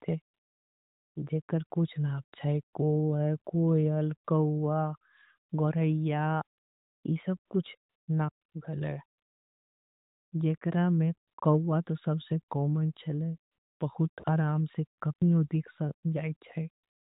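A speech clip with AMR comfort noise filling its pauses. From 0.34 s to 17.17 s, seventeen times, the phone stopped sending speech frames, and the receiver inserted smooth synthetic noise that switches in and out. Gaps run from 20 ms to 1.14 s, the longest at 9.18 s. One ends just before "ई सब" at 7.04 s. The band-limited AMR narrowband sound fits 12.2 kbps.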